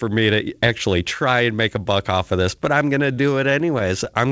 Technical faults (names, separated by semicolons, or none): repeated stalls (stutter)